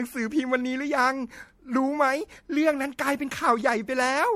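Throughout the speech, generation loss: the audio was likely decoded and re-encoded as MP3 about four times, each pass requantising on a shifted frame grid. It sounds swirly and hollow beyond a rate near 62 kbit/s, attacks blur, and nothing remains above 16.5 kHz.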